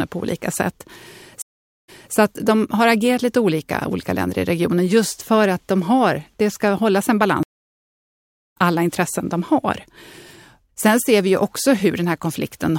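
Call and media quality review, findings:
Stream reconnect, 1.42–2.14 s: after "på olika sätt", 0.46 s dropout, then playback restarts about 0.26 s earlier at "att de har agerat", repeating audio. Server resent a burst to a fresh decoder. Waveform: flat gap, brief fade-in ramp.

Stream reconnect, 7.43–8.56 s: after "det ska hållas en", 1.13 s silence, resumes about a second later at "alla intressen de", so content is skipped. Live-stream rejoin with a new decoder. Spectrogram: blank column, then a soft onset.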